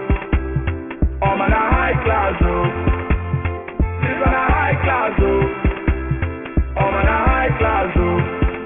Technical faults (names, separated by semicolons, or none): aliasing